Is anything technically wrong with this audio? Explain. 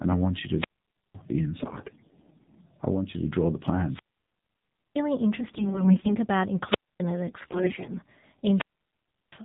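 Yes. Several technical faults are audible.

Throughout, the speech carries AMR narrowband mobile codec damage, and it is plainly audible. Nothing above 4 kHz survives, so the sound is muffled and boxy. The codec rebuilds the voice from a vocal-tract model fed by a few pulses per short sub-frame. At this low rate, which fits AMR-NB near 7.4 kbps, those pulses are sparse. The result is a buzzy, synthetic timbre.

There are four wireless microphone squelch dropouts. The first runs from 0.55 to 1.18 s, just after "I want you". The second runs from 3.85 to 5.04 s, after "you to draw the". The others run from 6.61 to 7.05 s and from 8.49 to 9.40 s. In each, the radio signal fades and the receiver's squelch mutes the output. Hiss rises first, then the sound drops to near silence. The holes last about 0.51, 0.97, 0.26 and 0.71 s.

There are three bursts of AMR bit errors. They fall at 1.62 to 2.63 s, ending just before "I want you to", at 5.40 to 6.17 s, and at 7.28 to 7.99 s. 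On a weak link, a sizeable share of the less protected bits arrived flipped. The first burst is the heaviest. Pulses land in the wrong places, and the fine pitch, gain and spectral values are off. Pitch and level roughly hold, but the voice turns hoarse, scratchy and gargly.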